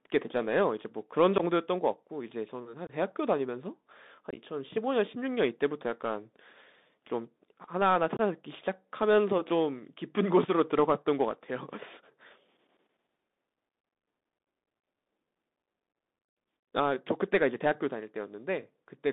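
Throughout, the speech runs over a Bluetooth CVSD headset codec whose one-bit adaptive steps fit a 64 kbps link. The line is squeezed to roughly 200 Hz to 3.7 kHz, with scratchy sibilants and a granular hiss.

Unconcealed Bluetooth headset packet loss occurs at 1.38 s, 2.87 s, 4.31 to 4.42 s and 8.17 s. A few milliseconds of voice packets went missing, leaving abrupt holes of about 15 to 22.5 ms. At 4.31 s, about 37.5 ms is scattered over 60 ms and sounds like a brief chopped crackle.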